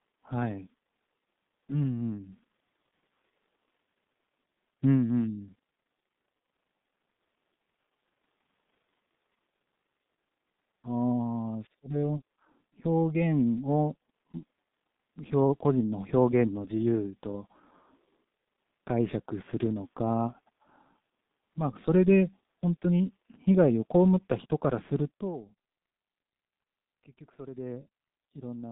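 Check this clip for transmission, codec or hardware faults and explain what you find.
One codec fault runs through the whole speech clip. The damage is heavy, and it fits the G.723.1 codec. That low-rate telephony coder, here sounding like its 6.3 kbit/s mode, packs speech into long 30 ms frames. It models the voice coarsely and refreshes that model slowly. The band is cut to roughly 150 Hz to 3.7 kHz. So the speech sounds muffled and hoarse, and consonants smear together.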